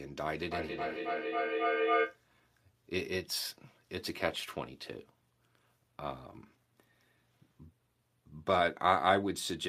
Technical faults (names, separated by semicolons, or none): feedback echo between two devices